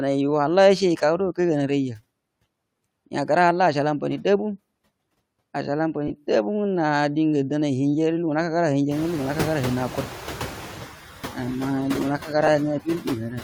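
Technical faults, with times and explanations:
Throughout, noise suppressor artifacts: the background sinks between phrases and swells back under the speech. The suppressor is pulling down bands it judges to be steady noise, by about 20 dB, frame by frame.
6.08 to 6.11 s and 12.47 s, lost LE Audio frames: a brief rough, hissy smear replaces the speech, about 20 ms at the first point and about 10 ms at the second. Frames on the Bluetooth LE Audio link went missing, which fits two frames and then one. The LC3 decoder filled each gap by repeating the last spectrum with scrambled phase.
8.91 to 10.74 s, noise suppressor catching up: the room noise jumps by about 23 dB near 9 s and at first comes through with little reduction, getting only about 5 dB. It then settles lower over roughly 1.8 s, because the suppressor's noise estimate takes that long to adapt to the new level.
12.19 to 12.29 s and 12.84 to 13.06 s, speech cut by the noise suppressor: short stretches of speech sound swallowed and faint, dipping by about 8 dB and then about 15 dB, for roughly a tenth of a second each time. 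The suppressor mistook quiet speech energy for noise and turned it down with the background.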